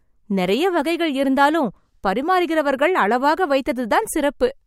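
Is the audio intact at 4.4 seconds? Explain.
Yes, at 4.4 s the speech runs intact, with no dropout, click, distortion or other fault at that point.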